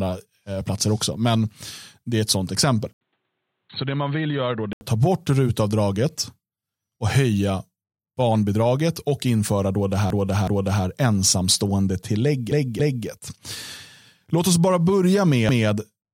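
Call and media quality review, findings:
Input switched to a poorer device, likely, 2.93–4.81 s, between "är ett sånt exempel" and "ta bort rutavdraget": 80 ms dropout at the switch, then band cut off above 4.3 kHz, level down about 5 dB, a different faint noise floor well under the speech. Speech turns dull and boxy for the span, then clears.

Repeated frames, codec/transport stage, re-sent compressed blocks replayed by the decoder. 10.10–10.85 s, after "och införa då det": 371.5 ms block played twice more, stutter, 743 ms added. 12.52–13.08 s: 278.6 ms block repeated twice, 557 ms added. 15.49–15.68 s: 185.8 ms block repeated once. Block sizes fit runs of about 93 ms frames.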